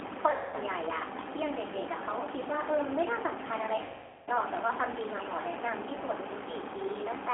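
The whole clip runs through the G.729 codec at 8 kbit/s, squeezed into a 300 Hz to 3.4 kHz line band, so the speech sounds noticeably rough and synthetic. At 0.31 to 0.56 s there's VoIP packet loss concealed by the speech codec: about 220 ms goes missing, and the decoder stretches its last pitch and filter into a fading buzzy tone or coloured noise. It happens again at 3.82 to 4.29 s, a longer gap of roughly 450 ms that is likewise stretched and fades away.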